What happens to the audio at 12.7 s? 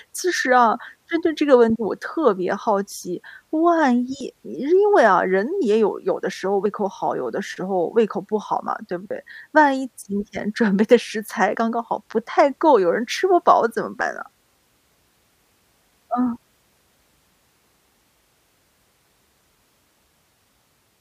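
Nothing goes wrong at 12.7 s; the speech there plays through intact, with no dropout, click, distortion or other fault.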